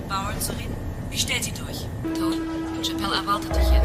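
Likely dropped buffers (overrun) left audio uncollected, so the sound skips ahead at 0.6, 2.32 and 3.04 s, losing a few tens of milliseconds, and around a tenth of a second at 2.32 s.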